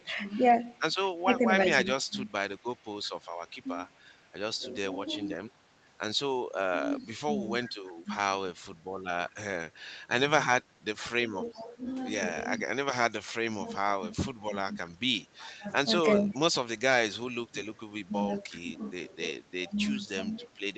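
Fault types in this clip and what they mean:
Echo leak: A faint copy of the speech returns about 361 ms late, well below the voice. It is likely loudspeaker pickup the echo canceller missed.
Speech suppressed in double talk: The speech dips in pieces, by up to roughly 20 dB. The likely cause is the echo canceller turning down its own talker along with the loudspeaker echo during overlapping talk.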